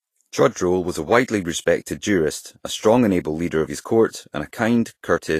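Throughout, the speech stops dead at 14.2 kHz and the treble turns grainy and hissy, likely Vorbis compression at a low bitrate coarsening fine detail into noise.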